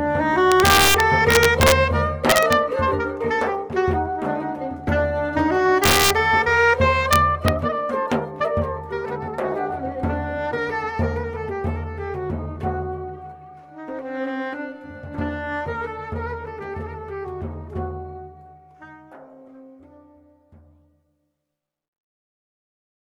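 Integer overflow at 0.52–1.72, 2.30–2.53, 5.84–6.10 and 7.13–7.48 s: peaks driven about 1–5 dB past the integer limit wrap to the opposite sign, cracking the audio.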